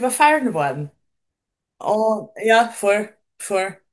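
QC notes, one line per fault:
No technical faults heard.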